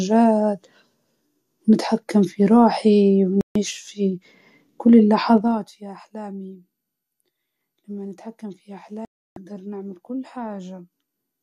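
At 3.41 s the speech cuts out for about 0.14 s, a digital broadcast dropout: corrupted frames failed, so the receiver muted until clean ones arrived. From 5.36 to 5.76 s a level drop of roughly 20 dB comes in 2 dB steps, around thirty a second, and you get zipper noise, a quick ticking over the voice because nothing smooths the jumps. Then at 9.05 s there's a longer dropout, about 0.31 s of silence, and whatever was said there is gone.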